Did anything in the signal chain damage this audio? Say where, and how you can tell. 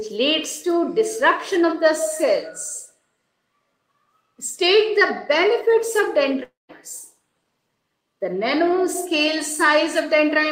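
Yes. At 6.43–6.71 s the sound smears into a fading buzz, then falls silent, and resumes with material missing, likely a long network dropout.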